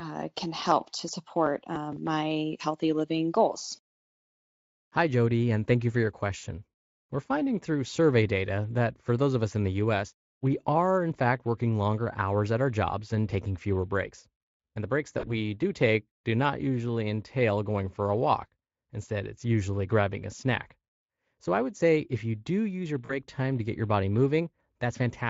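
VoIP packet loss concealed by the speech codec occurs at 3.59–3.62, 6.37–6.44, 15.19–15.29 and 23.05–23.12 s. These gaps fit one to three lost 20 ms Speex frames. The decoder stretches the last pitch into a fading buzz. A spectrogram shows smeared, flattened harmonics, and the waveform shows a shrinking envelope.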